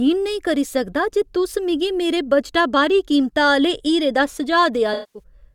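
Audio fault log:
4.93–5.23 s, AAC frame loss with concealment: about 0.21 s of speech drops out near the end. The decoder covers it by reusing the last good spectrum with scrambled phase, so it comes across as a smeared, noisy patch. That length fits roughly ten lost frames.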